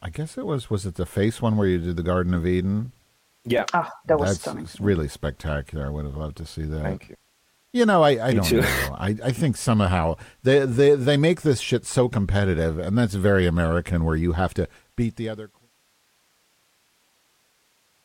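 No technical faults can be heard in this speech, and the smooth fade-out that begins around 14.5 s and reaches silence at 15.72 s is a deliberate edit.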